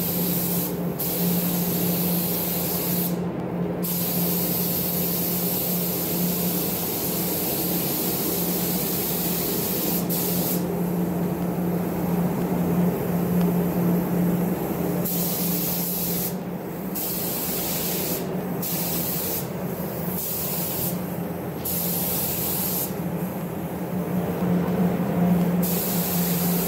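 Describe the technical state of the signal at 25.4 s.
Periodic USB or driver dropouts run through this moment, part of a series from 0.40 s to 26.42 s repeating every 1.0 s. At each interval something blocks the USB bus or audio driver, and a fraction of a millisecond of audio, around half a millisecond, is replaced by silence. Around 25.4 s this is heard as one of a string of regular small ticks, audible only where there is signal.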